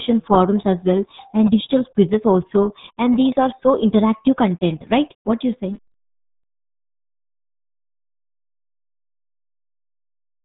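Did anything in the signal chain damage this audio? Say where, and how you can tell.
Yes. The damage is the RealAudio 14.4 codec, present throughout the clip from start to finish, and it sits at the codec stage. The speech is muffled, with nothing above about 3.8 kHz, and it carries the gargly, smeared texture of heavy low-bitrate coding, which fits an 8 kbit/s RealAudio 1 encode. A codec at that rate cannot spend bits on high frequencies, so it discards them and models the rest coarsely, leaving those artefacts.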